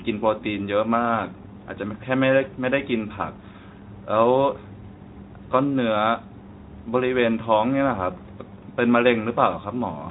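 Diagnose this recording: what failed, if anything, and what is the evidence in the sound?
Nothing stood out on listening to this speech, which comes through a Speex codec with light coding damage and nothing above about 3.9 kHz.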